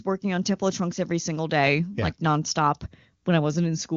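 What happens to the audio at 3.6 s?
Nothing goes wrong at 3.6 s: the speech carries on intact through the AMR wideband (HD Voice) codec, with the usual band limit near 7 kHz and no dropout, click or distortion at that point.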